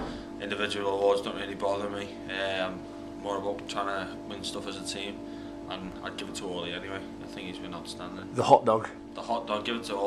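At 3.67 s and again at 5.92 s the audio jumps straight ahead, skipping roughly 20 ms and then roughly 70 ms, likely a dropped buffer (overrun). The waveform shows an abrupt seam with no silent gap, and the spectrogram a vertical discontinuity at each join.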